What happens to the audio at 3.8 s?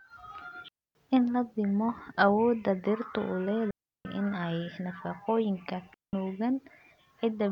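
At 3.8 s you're right inside a digital wireless dropout, running from about 3.71 to 4.05 s, roughly 0.34 s. The receiver lost too much of the link's data and muted itself with a very quick fade, so the speech just drops into a clean hole of near silence, with no crackle or noise burst either side.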